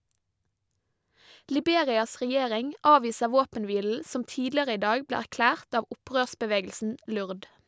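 A short speech recording with no technical faults to report. Nothing in it calls for a time, a value or a cause.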